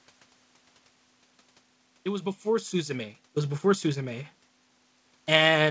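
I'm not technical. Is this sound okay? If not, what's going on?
Yes, it's okay.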